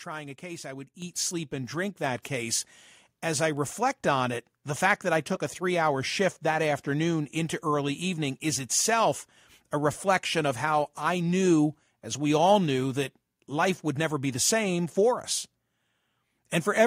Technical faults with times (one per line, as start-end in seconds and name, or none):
1.02 microphone volume stepped up
2.04 microphone volume stepped up